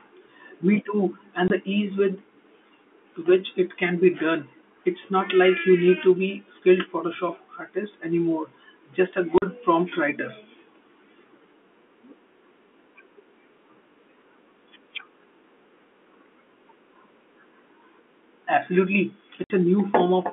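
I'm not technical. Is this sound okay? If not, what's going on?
No. The speech has three brief dropouts from packet loss filled with silence, at 1.48 to 1.50, 9.38 to 9.42 and 19.44 to 19.50 seconds. Chunks of the transmission went missing and were replaced by silence. The gaps are 20, 40 and 60 milliseconds long, which fits 20-millisecond packets, and each one starts and stops abruptly. The narrow telephone-style sound comes from G.711 telephone coding.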